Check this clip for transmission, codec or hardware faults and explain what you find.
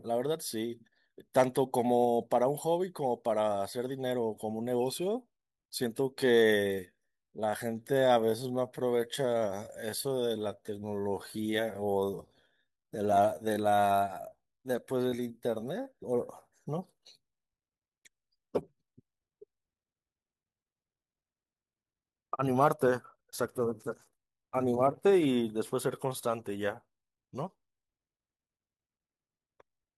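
One fault is present: a time-stretched section from 6.00 to 15.92 s. The speech suddenly slows to 0.72 times its pace while the pitch holds steady. This is likely software lengthening the audio by repeating short slices. It sounds dragging.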